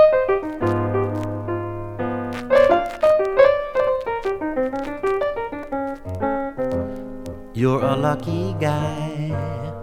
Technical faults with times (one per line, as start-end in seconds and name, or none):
5.63 repeated buffer
7.33 repeated buffer